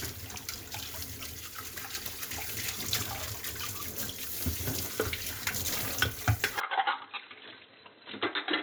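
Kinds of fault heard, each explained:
Input switched to a poorer device: the input likely changed at 6.6 s, so the sound suddenly dulls, loses everything above 4.1 kHz, drops about 5 dB in level and gains faint new noise.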